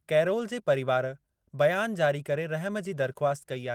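No technical faults are audible.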